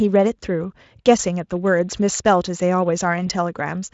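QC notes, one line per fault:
3.27–3.31 s, VoIP packet loss concealed by the speech codec: a brief buzzy or noisy smear fills the gap instead of silence, fitting a single lost 20 ms frame, with a weak recovery after.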